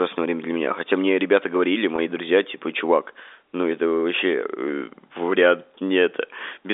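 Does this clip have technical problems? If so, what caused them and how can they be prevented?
Yes. About 20 ms of the stream was lost, which fits a single dropped packet, and the receiver filled the gap by repeating the last pitch period. Between 1.96 and 1.98 s, after "мне ребята говорили" and before "друзья типа чувак ну", the speech briefly holds with a slight buzz. Forward error correction on a less congested link would prevent this packet loss with pitch repetition.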